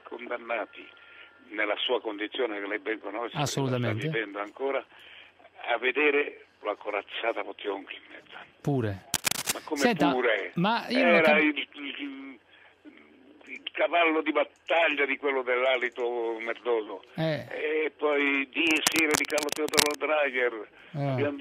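Cable scratch noise appears from 9.14 to 9.52 s, about level with the sound, and again from 18.67 to 19.97 s, slightly quieter: rough rustling bursts, likely a worn connector being moved.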